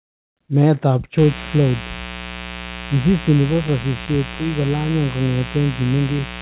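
A switching source such as a dimmer, rectifier or unshielded run coupled sharp spikes from a 60 Hz mains supply into the signal chain of this speech recording, producing mains buzz from 1.18 s to the end. Because those spikes arrive twice per cycle, the interference is a dense stack of 60 Hz harmonics rather than a pure hum. It sits only about 10 dB below the speech, so it is heard as a steady, raspy buzz under everything after the first second. Between 3.42 s and 4.37 s, packets were lost or arrived late in a scattered way, and the receiver covered each hole by extending the sound just before it. This gives scattered short gaps: roughly seven small patches, the longest around 15 ms, which together fill about 70 ms of that stretch. They come through as brief ticks and smeared hiccups within speech that otherwise stays clear. The call path's band limit at 4 kHz, which fits a narrowband G.711 mu-law link, is audible as a telephone-like dullness.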